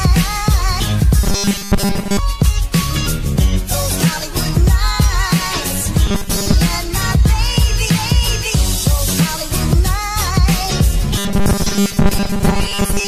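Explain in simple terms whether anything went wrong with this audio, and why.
Robotic sound from repeated short buffers occurs at 1.23–2.19 s, 6.07–6.54 s and 11.18 s to the end. The audio takes on a fixed 200 Hz metallic buzz, likely from the same tiny 5 ms chunk replaying most of the time. Unlike a dropout, it never falls silent.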